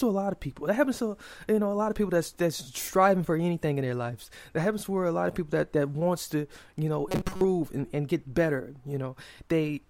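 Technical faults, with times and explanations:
7.09 to 7.45 s, robotic sound from repeated short buffers: between "wants to you know" and "and and get better", fresh audio likely stopped arriving in time, so the playback side kept refilling the gap by looping its most recent tiny slice. Most of the real speech in that stretch was skipped. Each loop lasts about 5.3 ms, which imposes a steady 188 Hz buzz, so the voice becomes a flat, metallic drone that only loosely tracks the words.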